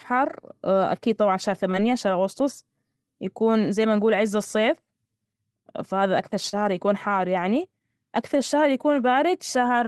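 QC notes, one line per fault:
1.71–1.75 s and 6.49–6.55 s, short concealed packet loss: 20 ms, then 40 ms, never arrived, so the receiver extended the preceding sound, leaving brief smears after "أكيد طبعا شهر" and "فهذا أكثر".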